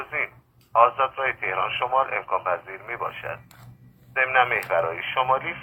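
From the start until 4.0 s the sound is dull and smeared, with little real treble and a papery, synthetic top end, and codec artefacts stand out. At 4.0 s clarity and high-frequency detail jump up abruptly, with no gap. This is an adaptive stream starting at a low bitrate: the player opened on a low-quality version to begin quickly, which sounds like Opus at around 32 kbit/s, then switched to a better one, likely near 64 kbit/s, once it had measured the connection.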